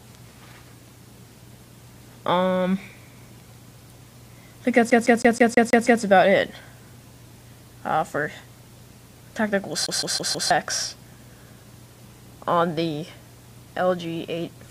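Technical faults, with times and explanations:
4.90 to 6.03 s, CD stuck on one turn: the audio catches on a single fragment about 0.16 s long and stutters through it seven times in quick, even succession, with a brief mute at every jump back. A scratch makes the laser lose its place and fall back one track on each rotation.
9.86 to 10.51 s, CD stuck on one turn: another 0.16 s loop appears, repeating four times before playback moves on.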